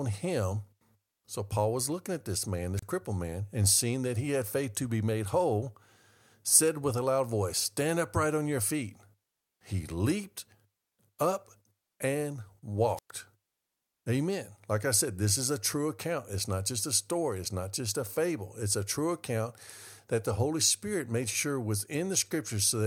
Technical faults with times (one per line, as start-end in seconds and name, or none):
2.77-2.84 wireless microphone squelch dropout
12.96-13.11 wireless microphone squelch dropout